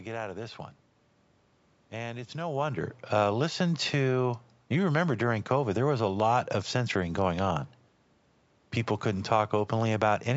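No technical faults are audible.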